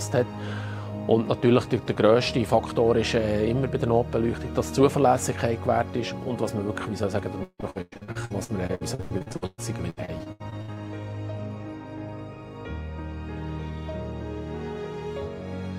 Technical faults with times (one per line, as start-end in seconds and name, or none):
7.43-10.78 repeated packet loss (robotic sound)